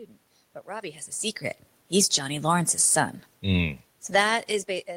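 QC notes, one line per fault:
1.86 to 4.86 s, automatic gain falling: the gain control judged the input too loud and eased its gain down by about 4 dB over three seconds. The room noise sinks along with the speech, which separates this from the talker moving around 4 s, where only the voice changes.
2.11 to 3.26 s, automatic gain rising: inside that fall, the control briefly judged the level too low and pushed gain up by about 4 dB over roughly a second. Speech and room noise swell together, unlike the talker's movement near 1 s, which changes the voice alone.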